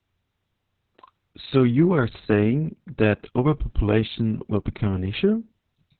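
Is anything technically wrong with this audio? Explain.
Yes. For the whole clip the speech sounds muffled, hoarse and faintly robotic, with nothing above about 4 kHz. This is heavy Opus voice compression. The codec has fallen back to its SILK linear-prediction coder and narrowed the band to narrowband, discarding everything above 4 kHz. It also codes the excitation that drives the vocal model very coarsely. The depth of this damage points to a bitrate around 6 kbps with long 60 ms frames.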